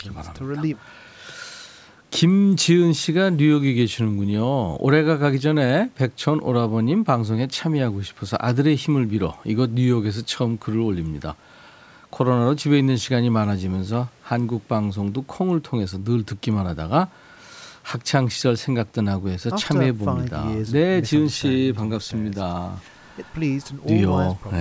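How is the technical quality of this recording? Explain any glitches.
No glitches turn up anywhere in this speech recording; it has simply been through a call's microphone processing, which trims away the deepest bass and leaves nothing above 8 kHz, and that's just how such a path normally sounds.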